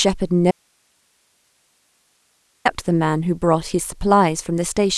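At 0.51 s the speech cuts out abruptly, an audio dropout to a faint residue lasting about 2.1 s until 2.65 s. Only hiss remains, roughly 45 dB down, so the signal was likely lost upstream while the path after the break stayed live.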